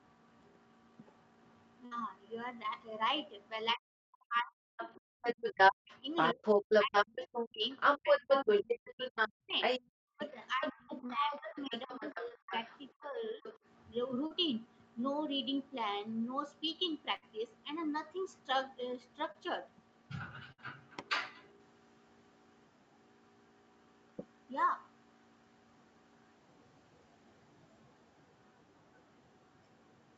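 At 1.85 to 2.03 s a burst of packet loss cut out about 60 ms of the call. The receiver extended the last sound for 57 ms while fading it, so a held buzz or hiss bridges the hole and the speech resumes with that stretch missing.

From 3.73 to 13.44 s the speech is suppressed in double talk. The echo canceller likely could not tell the talker from the loudspeaker echo and pulled both down. Over around five seconds in total the voice dips, thins or drops out in pieces, by as much as about 40 dB.

Overlapping that, from 4.36 to 13.57 s, the other side's voice leaks through, likely because echo cancellation left part of the loudspeaker signal in the microphone. That second voice sits at about 5 dB above the talker.

Short concealed packet loss occurs at 11.06, 12.28, 14.26 and 19.32 s, each a gap of 20 to 40 ms that the decoder filled with 21 to 39 ms of continued sound. Each one is heard as a brief smear or wobble, and a consonant can disappear.

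Two more bursts of packet loss follow at 17.16 to 17.24 s and 20.52 to 20.60 s. Each drops about 60 ms, which is covered by roughly 58 ms of fading continuation, leaving a buzz or hiss before the speech jumps ahead.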